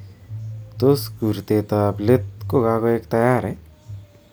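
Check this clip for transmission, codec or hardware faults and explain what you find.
Nothing turns up here, since the speech comes through steady and whole with nothing that points to trouble anywhere along its path.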